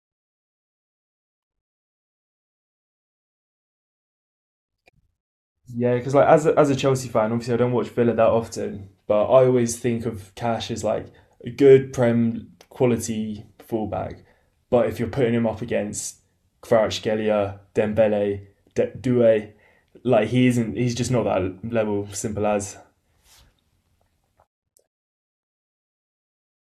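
Listening through the recording, nothing in it stood out as a technical problem.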